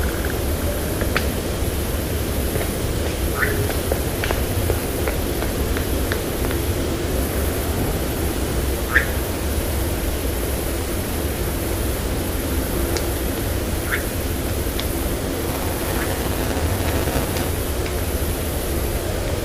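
Everyday sound, with a robotic 200 Hz buzz from 15.48 to 17.49 s. This is buffer tearing: writer and reader cross every 5 ms period, splicing in roughly a fifth of audio about 10 ms stale.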